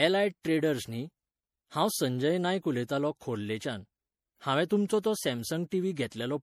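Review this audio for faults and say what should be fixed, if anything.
Generation loss runs through the whole speech clip. The speech has likely been decoded and re-encoded with MP3 a few times, at a rate the texture suggests is near 64 kbit/s. Each pass re-quantised the signal on a shifted frame grid, so the losses stacked. The result is swirly, hollow-sounding speech with smeared consonant attacks, rougher than a single encode at that rate would give, even though content still reaches about 20.8 kHz. To prevent it, keep a lossless master and encode to MP3 only once, from that source.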